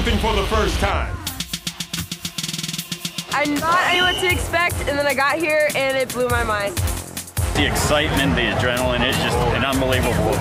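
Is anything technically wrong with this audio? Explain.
Yes. At 1.96, 3.92, 6.66 and 9.09 s the audio lurches forward, losing roughly a tenth of a second at the first two, about 150 ms at the third and around 40 ms at the last. These are compressed frames skipped. Whole coded blocks never reach the output, and the jumps fit whole 42.7 ms frames.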